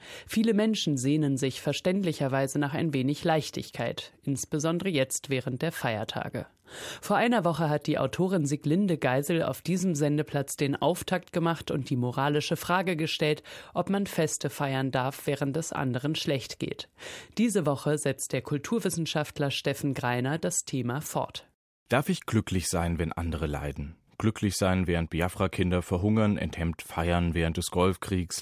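No technical faults can be heard in this speech recording.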